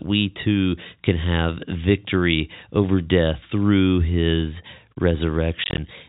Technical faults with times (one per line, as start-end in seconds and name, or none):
5.64-5.78 packet loss filled with silence